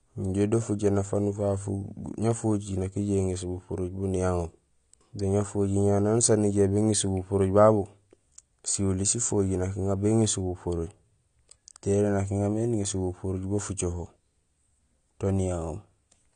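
From start to finish, the speech has likely passed through AAC compression, an AAC-LC encoder running short of bits. With too few bits to code every frequency line, the encoder discards the top of the spectrum, and nothing survives above about 9.9 kHz. The result is a dull, closed-in sound with plainly audible coding damage throughout, the kind of loss that points to a low bitrate of around 32 kbps.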